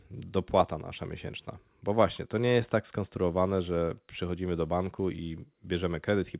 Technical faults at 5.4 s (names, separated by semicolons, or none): none